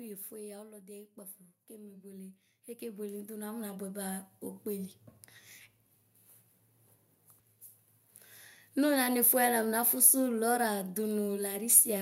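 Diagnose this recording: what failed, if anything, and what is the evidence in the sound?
The first failure is automatic gain falling, in the call-processing stage. From 0.05 to 0.95 s the speech starts loud and then sinks by about 5 dB. The control judged the input too hot and pulled its gain down over that second. The background noise drops by the same amount as the speech. That matters because a talker backing off the microphone would change the room-to-voice balance, and here the balance stays fixed.

The second failure is automatic gain rising, in the same stage. From 0.93 to 5.0 s the level climbs by about 14 dB as the control judges the input too quiet and slowly lifts its gain. The speech and the noise floor swell together over roughly four seconds. A real change in vocal effort would alter the timbre, and a noise gate would jump rather than ramp, so this smooth joint rise points to the gain loop.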